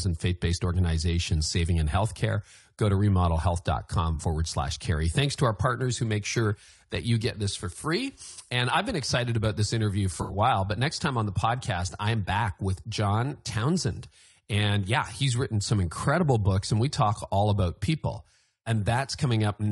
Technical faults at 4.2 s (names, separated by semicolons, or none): low-delay AAC compression; AAC frame loss with concealment